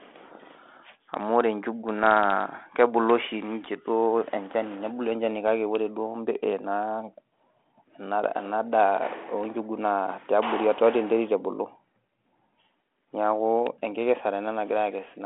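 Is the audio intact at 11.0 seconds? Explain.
Yes, the audio is intact at 11.0 seconds, with nothing there beyond the narrow telephone band of the 32 kbit/s G.726 ADPCM path it passes through.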